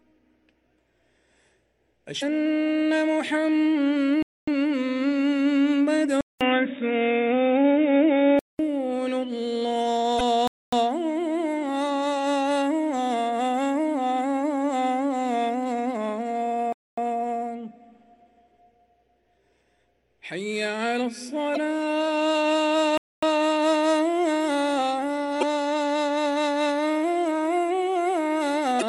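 Damaged data in a compressed stream first appears at 2.18 to 2.23 s and returns at 10.17 to 10.21 s, 21.54 to 21.58 s, 25.39 to 25.43 s and 28.78 to 28.83 s. At each point, corrupted bytes in the encoded stream throw the decoder off. It misreads the affected frames, loses sync and hunts for the next valid frame header. Each event is a brief chirp or blip of about 40 ms.

A gap between chunks opens at 4.23 to 4.48 s, and the same 250 ms silence recurs at 10.48, 16.73 and 22.98 s. The audio was delivered in 6 s pieces, and each join leaves a short hole. This fits padding at chunk boundaries or a player that starts each piece late. Nothing is lost from the content, but the flow is cut at these regular intervals.

Input switched to a poorer device covers 6.21 to 8.59 s. It opens with about 200 ms of silence at the changeover. The sound then goes dull and boxy, with nothing above 3.8 kHz. A new noise floor sits well below the signal, roughly 35 dB down, and the level shifts by around 5 dB. 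This is likely a change of capture device, such as a headset dropping into its call profile, before the fuller sound returns at 8.59 s.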